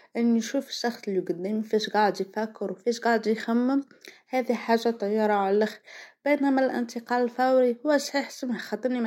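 Nothing here sounds broken at any point, so there's no fault to report across the whole clip.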